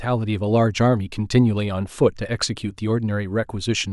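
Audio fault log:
No faults heard anywhere in this speech recording.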